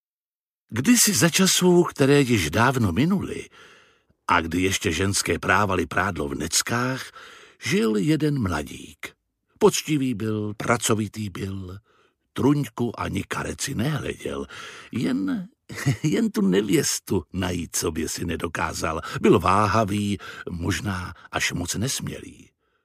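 No technical faults can be heard at any point in the audio.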